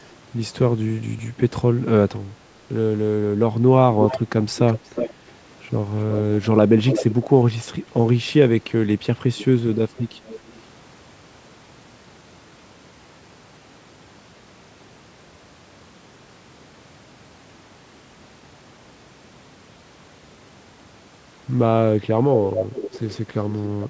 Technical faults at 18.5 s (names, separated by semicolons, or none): none